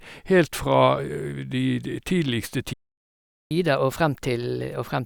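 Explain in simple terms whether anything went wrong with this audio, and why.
The player most likely ran out of incoming data, or was briefly held up, and had nothing to send to the speakers. That is a playback stall. Right after the words "fra de de tidligste", at 2.73 s, the speech stops dead and the output goes silent for about 0.78 s, until 3.51 s. It is a clear gap in the middle of the talking, not a natural pause, and the speech then picks up where it left off.

Once the data arrived again, the player tried to win back the time it had lost by playing its backlog faster. That is catch-up at higher speed. From 3.51 s to the end of the clip, the speech runs at 1.15 times normal speed. Because the player speeds it up by resampling, the pitch rises too, by about two semitones, so the speaker sounds slightly hurried and a little higher, as if the recording were played a bit too fast.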